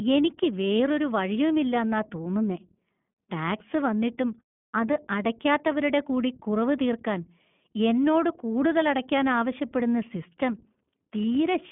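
Speech passed through the iLBC codec for its whole length. The band is cut to a telephone line, roughly 150 Hz to 3.4 kHz, with nothing above 3.7 kHz, so sibilants and breath lose their air. The coding damage is plainly audible as a rough, slightly synthetic grain. That grain comes from each short frame's excitation being coded independently, which fits 20 ms frames and the 15.2 kbps mode.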